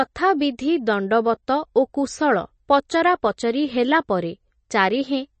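A short speech recording carries plainly audible MP3 compression from start to finish. The treble stops dead at about 8.3 kHz, so the top end sounds dull and boxed in. Weak detail comes and goes between frames, giving the sound a watery, swirling texture. The damage points to a low bitrate, around 32 kbps. At that rate the encoder likely ran short of bits, cut the high band and dropped quiet components to save space.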